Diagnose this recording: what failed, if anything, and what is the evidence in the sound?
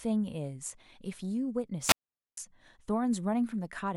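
Wireless microphone squelch dropout on the analogue radio link: from 1.81 to 2.37 s the signal fades, hiss rises, then squelch mutes the output for about 0.45 s.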